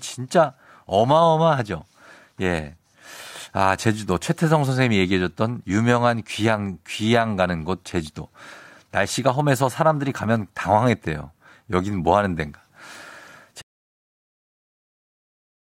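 At 13.62 s the speech cuts out abruptly and the last two seconds are an audio dropout to silence, with no room tone or hiss. That absence sets it apart from a natural pause or fade, and likely comes from the input link dropping while recording continued.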